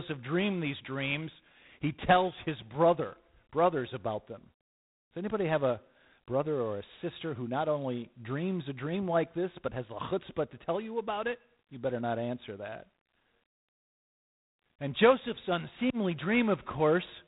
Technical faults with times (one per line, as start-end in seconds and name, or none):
0.00-17.27 G.726 ADPCM